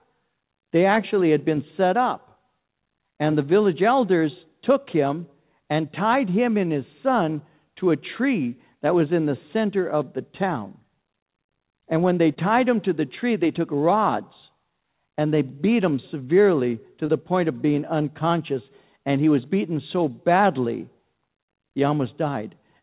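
Speech heard through a narrowband phone line with nothing above 4 kHz, with two brief smears at 12.34–12.38 s, after "when they", and 17.06–17.10 s, before "point of being unconscious". These are short concealed packet loss: about 20 ms of audio arrived too late, and the receiver extended the preceding sound to cover it.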